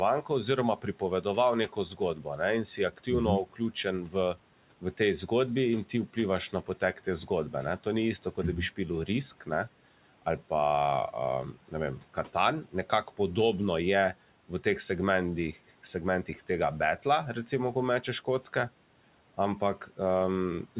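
Speech in which soft consonants and word endings sound swallowed and faint, sinking by up to about 12 dB across 0.22 to 5.29 s, 5.85 to 9.48 s and 11.54 to 13.19 s, just before "je v teh segmentih". This is speech cut by the noise suppressor, which mistook quiet speech for background. The room noise sits about 24 dB below the speech, and the band stops at 4 kHz, which fits a G.711 mu-law call path.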